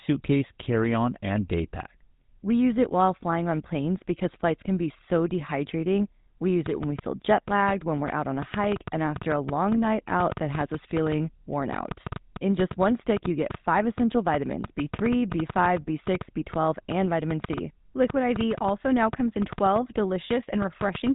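Speech carried through a GSM full-rate codec for its whole length: the voice has the buzzy, gravelly roughness of a coder that models the vocal tract and drives it with a coarse pulse excitation, consistent with 13 kbps full rate. On a spectrogram, energy stops flat at about 3.8 kHz with nothing above. From 6.66 s to 21.08 s a train of clicks ticks over the speech and the pauses, about 5.5 per second at uneven spacing, around seventy in all. Each click peaks roughly 10 dB above the signal, appearing as thin full-height vertical lines on the spectrogram and sharp isolated spikes in the waveform. The likely cause is interference from nearby equipment or a faulty connection or power supply.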